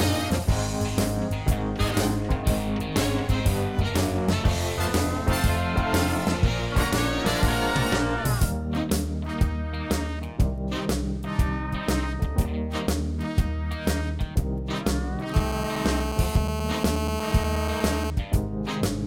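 A hard, raspy buzz enters at 15.34 s and holds steady until 18.10 s. It is GSM phone buzz. A 2G handset close by is transmitting in bursts about 217 times a second. The audio circuitry rectifies those radio pulses, so they turn into sound. The result is a 217 Hz tone with many harmonics, unrelated to the audio itself. It sits at about 6 dB below the signal. It stays constant throughout, which matches a phone on an active call.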